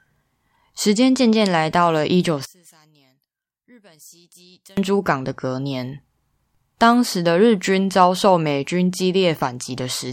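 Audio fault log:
2.45 to 4.77 s, one channel inverted: the speech drops by about 29 dB and turns faint, its centred body nearly gone, until it returns at full level. One stereo channel has likely had its polarity flipped, so the shared centre cancels in mono.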